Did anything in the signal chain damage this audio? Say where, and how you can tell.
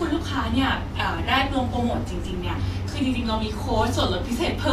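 Yes, at the codec stage: grainy, hissy treble throughout this speech, likely Vorbis compression at roughly 34 kbps. On a spectrogram, nothing above 14.2 kHz; the upper band is speckled noise.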